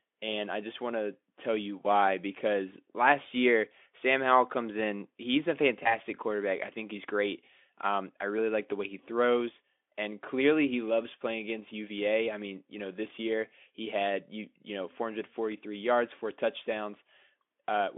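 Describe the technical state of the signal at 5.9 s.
VoIP packet loss concealed by the speech codec occurs from 5.83 to 5.97 s. A 20 ms gap, which fits a single lost frame, was filled by extrapolating the last pitch and filter at fading gain, giving a brief buzzy or noise-like smear whose weakness persists until about 5.97 s.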